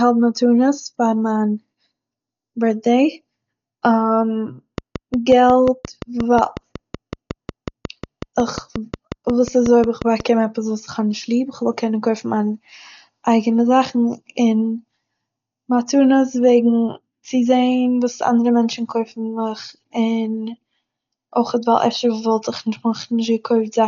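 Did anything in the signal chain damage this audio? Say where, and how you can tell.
Yes. The codec stage did clear damage. The whole clip is dull, with nothing above 6.9 kHz. That heavy loss likely comes from Dolby Digital compression at a very low bitrate, around 48 kbps. The encoder narrowed the band and starved many frequency lines of bits.

There is also a train of clicks from 4.78 s to 10.21 s. Roughly thirty similar pulses tick at a regular 5.5 per second, about 10 dB above the speech. The steady, repeated shape points to interference, likely in the analogue wiring.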